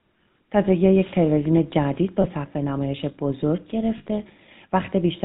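Speech coded with the GSM full-rate codec, in a way that fits its 13 kbps rate, has a plainly audible buzzy, gravelly roughness throughout, and the spectrogram shows a hard ceiling at 4 kHz. Lost GSM frames at 2.22–2.26 s and 3.98–4.07 s were concealed by repeating the last good frame. Each gap is heard as a brief metallic ring, seen as frozen, smeared harmonics on the spectrogram and a short held stretch in the waveform.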